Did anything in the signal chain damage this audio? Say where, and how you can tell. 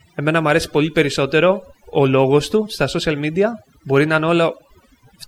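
Yes, overdone noise removal in the call-processing stage damaged this speech clip, throughout its length. The background drops and breaks up into twinkling specks, because an over-strong suppressor shut down individual frequency bands near its noise estimate, taking the quieter parts of the speech with them.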